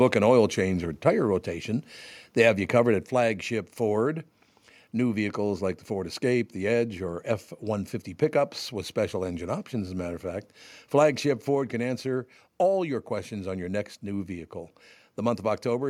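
Software likely cut the input gain in single steps, so the microphone volume stepped down at 1.02, 3.06 and 11.55 s, with the speech and background dropping about 3, 3 and 2 dB.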